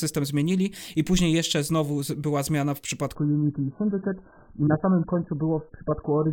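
At 3.15 s, right after "znowu była zmiana w", the speech drops to a lower-bitrate version of an adaptive stream until the end. Nothing remains above 1.7 kHz, and the sound turns thin and smeared, which fits a fall from about 96 to 8 kbit/s AAC. The switch is sudden and leaves no gap or pause, unlike a rebuffering stall.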